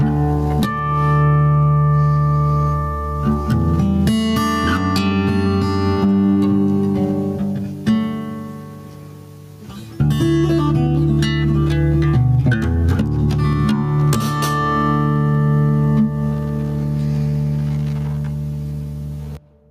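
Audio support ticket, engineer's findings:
Gain pumping, throughout the clip. Gain swing around 10 dB. Loud and soft passages squashed close together. Likely cause: input gain set far too high for the microphone, with a fast limiter or compressor clamping down on every peak and releasing in the pauses.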